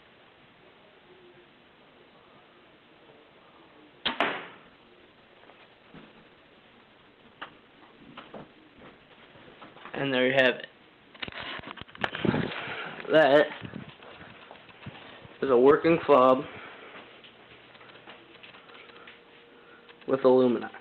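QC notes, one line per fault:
4.67–10.73 s, call bitrate drop: the call's bandwidth estimate fell and the encoder was pushed from 40 kbps down to 12 kbps, staying at its lowest for about 5.4 s before recovering. With so few bits available, the codec quantises everything more coarsely and narrows its coded bandwidth from 20 kHz to 8 kHz, so the sound loses its top end and turns muffled, rough and watery until the rate climbs back.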